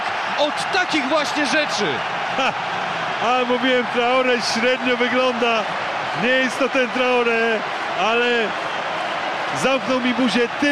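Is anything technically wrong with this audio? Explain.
No, there is nothing technically wrong with this audio. No faults can be heard anywhere in the clip.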